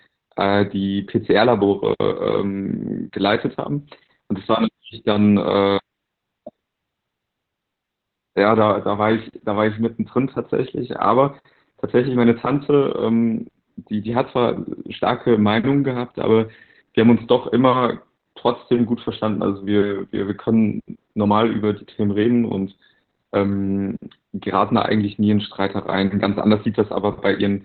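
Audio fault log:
throughout Opus voice compression: narrowband SILK coding, which fits a bitrate near 8 kbps, removes everything above 4 kHz and coarsens the excitation, leaving the speech muffled, hoarse and slightly robotic.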